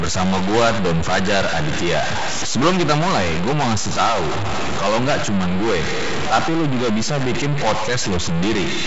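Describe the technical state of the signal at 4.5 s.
At 4.5 s the speech carries distortion that runs through the whole clip, most likely a stuck bit, one data bit held at a fixed value so about half the samples are offset by that bit's weight. On a waveform the trace looks stepped and jagged, with pauses filled by a noise floor. A spectrogram shows broadband grit smeared up to the wideband telephone coding's ceiling near 7.7 kHz.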